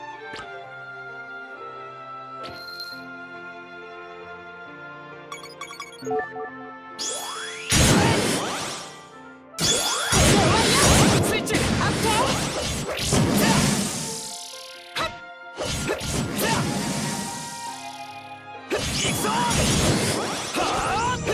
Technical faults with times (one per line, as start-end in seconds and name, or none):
none